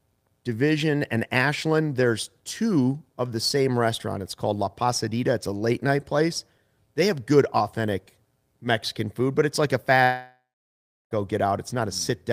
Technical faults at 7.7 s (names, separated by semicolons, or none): none